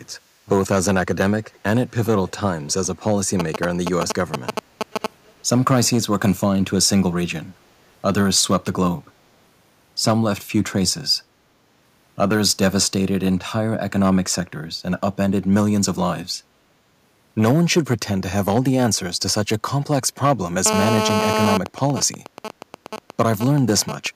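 A speech recording carries a harsh, crackly edge on its loudest syllables all the way through. That is hard clipping: the signal is driven about 6 dB past what the chain can pass, so the peaks are sliced flat. Only around one percent of the waveform is cut, but those squared-off tops spray high harmonics that ride on every loud moment. Four brief, very faint delayed repeats of the talker surface at 1.43 to 1.58 s, 2.26 to 2.31 s, 2.68 to 2.72 s and 5.27 to 5.33 s, each trailing the original by 374 ms and sitting far below the direct speech. The likely cause is echo leak: a loudspeaker on one end fed the microphone, and the echo canceller let small scraps slip back down the line. From 3.40 to 5.06 s a galloping dit-dit-dit of short raspy buzzes intrudes at roughly the same loudness as the speech. These are GSM signalling bursts, radio pulses from a nearby 2G phone arriving in clusters at about 217 Hz that the audio circuitry rectifies into sound. 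Between 20.66 and 21.57 s the pattern turns into a continuous, gritty 217 Hz drone full of harmonics, only about 1 dB below the speech. This is GSM phone buzz, the steady burst train of a handset in an active call. From 21.66 to 24.07 s it breaks back into intermittent GSM signalling bursts, well below the speech level, as the call continues with that phone's user silent.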